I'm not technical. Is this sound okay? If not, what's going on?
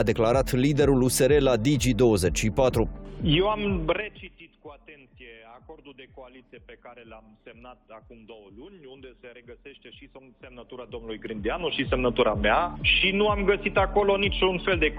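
No. The volume control is moving in coarse jumps instead of gliding smoothly, a problem called zipper noise. Each jump leaves a tiny click, and at roughly ten jumps a second these clicks run together into a ticking, zipping texture. It happens from 3.84 to 4.35 s, when the level drops a long way in large steps, and again from 10.41 to 11.95 s, when it climbs back up in smaller steps.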